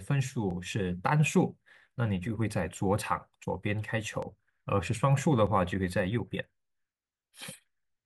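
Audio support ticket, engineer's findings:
Regular clicks in the speech, 0.51 s to 7.95 s, one every 1.24 s, about seven total. Likely clock drift buffer slips between two devices on separate clocks: a few hundred ppm apart, buffer over- or underruns, dumps or repeats a few dozen samples.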